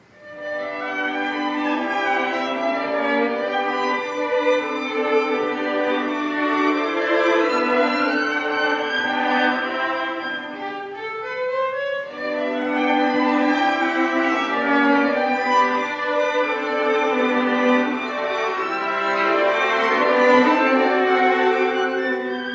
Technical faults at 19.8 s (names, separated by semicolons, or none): none